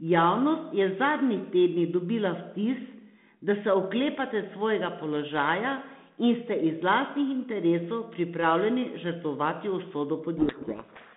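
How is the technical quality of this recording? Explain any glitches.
It's telephone-band speech through G.726 at 32 kbit/s, roughly 150 Hz to 3.6 kHz, with one real glitch at the end. From 10.38 s to 11.16 s there's a codec payload misread: the decoder reads the G.726 code words with their bits in the wrong order, so the speech gets buried in harsh distortion until the clip ends.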